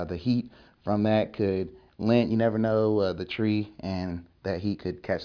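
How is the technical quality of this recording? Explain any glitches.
The technical quality holds up, with no glitches, dropouts or other faults anywhere in the recording.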